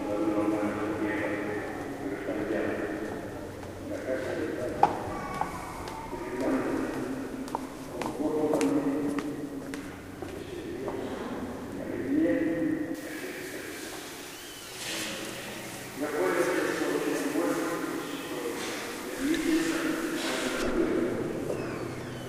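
From 12.95 to 20.62 s, pre-emphasis left on: an uncorrected J.17 treble boost lifts 10 kHz about 11 dB, making the sound thin and bright, with a visibly denser spectrogram above a few kHz.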